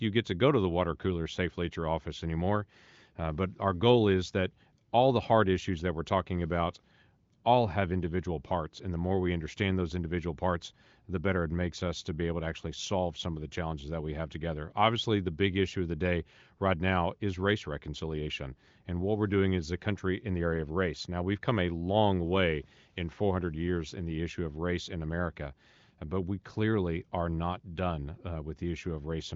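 No faults: the speech carries the band limit of an AMR wideband (HD Voice) path, with nothing above about 7.4 kHz, and its at most faint coding damage fits the top 23.05 kbit/s mode.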